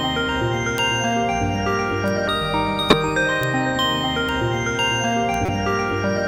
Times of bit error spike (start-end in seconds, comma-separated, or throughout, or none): 0.78, 2.08, 3.43, 4.29, 5.34